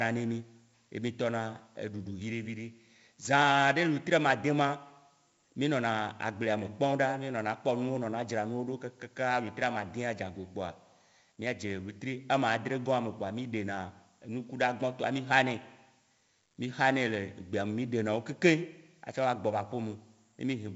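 4-bit ADPCM compression affects this speech throughout. Coarse adaptive steps leave heavy gritty hiss riding the loud passages, and nothing above 7.7 kHz survives, which fits a 16 kHz, 64 kbps stream.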